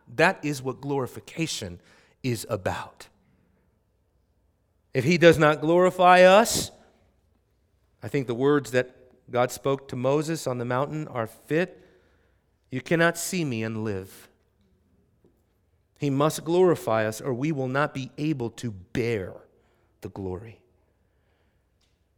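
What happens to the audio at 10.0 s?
Nothing goes wrong at 10.0 s; the speech carries straight through that moment with no dropout, click, glitch or other fault.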